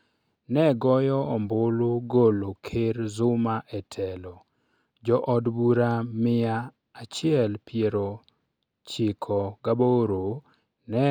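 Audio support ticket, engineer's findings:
No technical faults found in this speech recording. No dropouts, glitches or level problems to report on the playback path.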